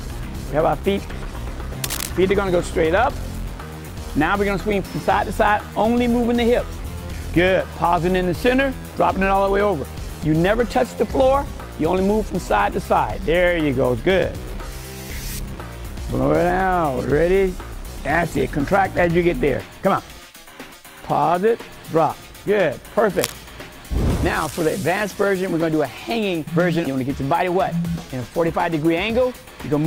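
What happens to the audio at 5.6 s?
Nothing goes wrong at 5.6 s; the audio plays through that moment intact, with no dropout, click or other fault.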